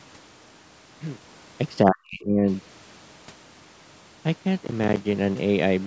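Speech that, from 1.83 to 2.47 s, sinks by something like 40 dB before recovering: speech suppressed in double talk, likely caused by an echo canceller that could not tell this talker from far-end echo while both sides spoke, so it attenuated everything. From 4.65 to 4.97 s a gritty burst of crackle tears through the sound, made of many tiny hard-edged silent gaps. That is processor overload crackle: a run of audio buffers, each around 10 ms, missed their deadlines and were left empty. The call microphone processing, with nothing above 8 kHz, is not among the faults.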